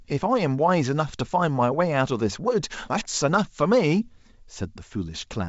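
No faults can be heard.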